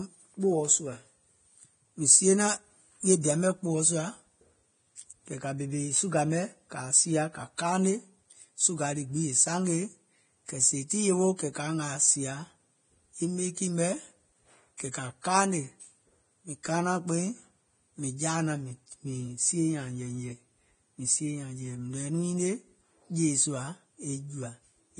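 Heavy, low-rate lossy coding, likely Vorbis, runs through the whole speech recording. The treble is quantised so coarsely that fine detail turns to grainy hiss, and nothing survives above about 9.7 kHz, which fits a bitrate in the low twenties of kbps. The voice sounds muffled and rough.

Pre-echo appears twice, from 14.77 to 14.80 s and from 14.91 to 14.94 s. Each sharp onset sits late in a transform block, so the block's coding noise spreads back about 24 ms into the silence before it. The result is a brief hiss ahead of each attack and softened, smeared edges.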